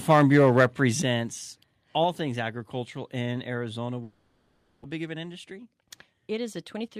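From 0.09 to 0.66 s the speech shows microphone overload: the input was likely set too high, pushing peaks about 5 dB past the converter's ceiling so that a few percent of samples are flattened. The loudest syllables gain a harsh, crackly edge. On the waveform the peaks are squared off. On a spectrogram, broadband smearing and extra harmonics rise above the voice at each clipped peak.

At 1.02 s comes a microphone volume step-down: the call software, likely reacting to that clipping, cut the input gain in one move by about 8 dB. Voice and background noise both drop together and stay lower. The waveform envelope shrinks abruptly at that instant. On the spectrogram every band, including the noise floor between syllables, darkens at the same vertical line.

Between 4.03 and 4.86 s there is a long network dropout, likely a stretch where packets stopped arriving. About 600 ms of speech is lost outright. 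The receiver bridged roughly 810 ms by extending the last sound into a fading buzzy hiss rather than falling silent. The speech then resumes further along. On the spectrogram, smeared, repetitive harmonic bands dissolve into diffuse noise, and the waveform shows a decaying, periodic fill.

From 4.98 s to the end, a jitter buffer speed-up trims the backlog from the dropout, which left the buffer holding around a fifth of a second too much. Short pitch-period slices are cut out repeatedly, so speech plays at about 109% speed with unchanged pitch and sounds hurried. The waveform shows seams where cycles were spliced. On the spectrogram, harmonic spacing stays constant while syllables sit visibly closer together.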